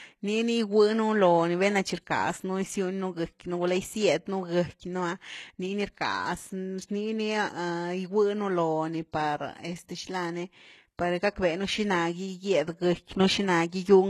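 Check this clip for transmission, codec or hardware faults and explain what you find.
One codec fault runs throughout the speech: s sounds turn gritty and metallic, with nothing above 12.3 kHz. This is likely HE-AAC compression, its spectral band replication copying lower bands upward, consistent with roughly 16 kbps.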